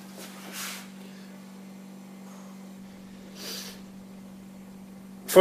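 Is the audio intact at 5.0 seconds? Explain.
No. A call bitrate drop runs from 2.82 s to the end of the clip, consistent with the encoder falling from about 128 kbps to 16 kbps. It codes more coarsely and trims the high frequencies, so the sound turns rough, watery or muffled, without recovering.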